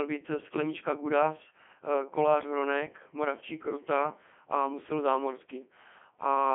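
Throughout, the speech has passed through a Codec 2 vocoder, likely at about its 3.2 kbit/s top rate, which keeps only pitch, voicing, energy and spectral shape and rebuilds the voice from sine waves. The result sounds robotic and buzzy, band-limited to 200 Hz to 3.4 kHz, with nothing above 3.5 kHz.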